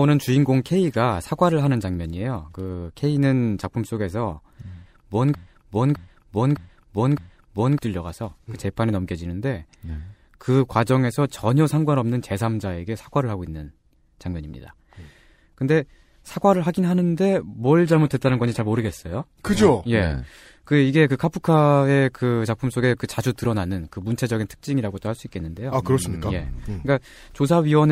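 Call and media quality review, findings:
Broken-record loop, 5.35–7.79 s: a 610 ms fragment repeats exactly four times back to back and the intervening audio is lost. Likely a stalled player or stream re-sending its last buffer. The waveform shows four identical blocks, and the spectrogram shows a tiled pattern.

Adaptive stream at a lower bitrate, 17.87–19.87 s: treble drops abruptly with no gap. The sound points to a switch from roughly 96 kbit/s AAC-LC to a 24 kbit/s HE-AAC rendition after throughput fell. The spectrogram shows a hard ceiling at 14.9 kHz and smeared, synthetic-looking upper bands.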